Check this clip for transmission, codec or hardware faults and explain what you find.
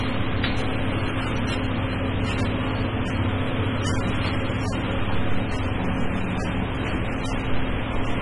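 The clip has one fault throughout, and it sounds like lossy codec damage. From start to finish the audio is dull and smeared, with a fizzy, warbling texture on sustained and noisy parts, and nothing is present above 11.1 kHz. The likely cause is AAC compression (AAC-LC) at a bitrate around 24 kbps. At that rate the encoder lowers its cut-off and quantises many frequency lines to zero, leaving holes that shift from frame to frame. On a spectrogram this appears as a hard ceiling at 11.1 kHz with patchy, blocky gaps below it. The waveform looks ordinary.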